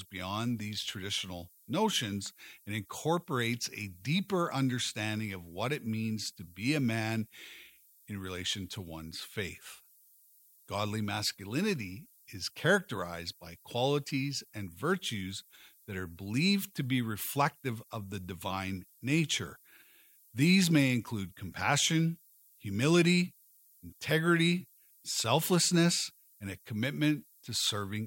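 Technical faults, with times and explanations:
Throughout, low bit depth with noise shaping: a steady, thin hiss sits under the speech the whole way, its level roughly 25 dB below the signal. The hiss is weak in the low and middle range but climbs sharply toward the top of the band, which fits a signal quantised to about 9 bits. Each sample is rounded coarsely, and the rounding error is fed back so that the resulting noise is pushed up into the high frequencies.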